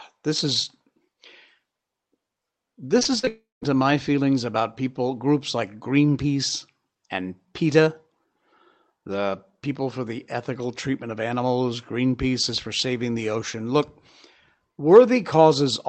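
From about 2.99 s to 3.66 s the speech breaks up with repeated packet loss, the choppy, robotic kind. Several short holes hit in quick succession, the longest around 42 ms. Each one gets patched by stretching the last bit of sound, and roughly 14% of that stretch is filled in that way. So you hear a choppy, stuttering texture with small pieces simply missing, all just before "to my feelings about".

Right in the middle of that, from about 3.28 s to 3.63 s, there's a longer hole that's likely a long network dropout. The last sound gets drawn out into a fading buzz, then goes quiet for a little under two tenths of a second. About a third of a second of speech never comes back, and the talker resumes on "to my feelings about". All of this runs over an Opus call path that's band-limited at 8 kHz.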